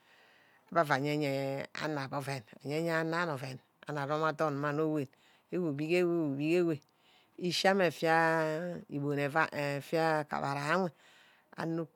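No technical faults can be heard at any point in the recording, so there is nothing to place in time order.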